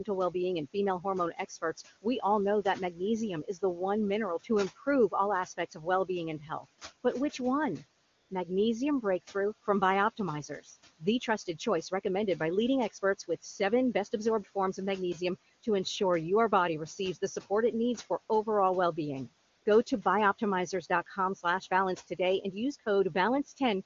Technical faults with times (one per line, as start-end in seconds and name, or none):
2.63-3.00 speech cut by the noise suppressor
5.45-5.87 speech cut by the noise suppressor
6.39-6.65 speech cut by the noise suppressor
8.05-8.29 AMR comfort noise
19.49-19.65 AMR comfort noise